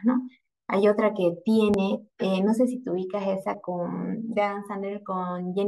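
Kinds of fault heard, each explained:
Dropped buffer (overrun): samples were likely overwritten before being read, so about 10 ms vanishes and the speech jumps ahead.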